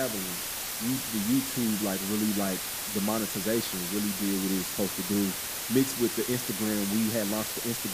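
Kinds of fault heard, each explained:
Low bit depth with dither: the speech is stored with very few amplitude steps, which fits a 4-bit signal, and random dither was added before rounding, so the rounding error becomes a steady white hiss throughout. Here that hiss is very loud, sitting only a few decibels under the speech itself. Without dither, the error would follow the speech as gritty, buzzing distortion that drops out in pauses; here it stays even, with no harshness.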